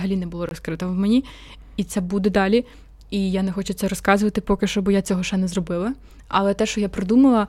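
A short hole after "не було" (0.49–0.51 s), and a tick after "поки що бо я" (5.05 s): blocks of digital silence, likely where unfilled output buffers dropped to zero. The second gap fits a 256-sample buffer.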